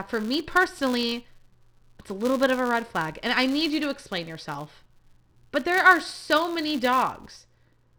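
A filter restarted on every block runs through the whole speech clip: it drops its state at each block boundary and starts again from silence, which fits a 256-sample block. Each restart leaves a small transient, heard as a buzz at 188 Hz that grows and fades with the speech level.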